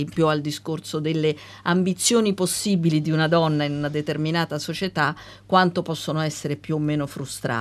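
No technical faults can be heard anywhere in the speech recording; the signal stays steady and intact throughout.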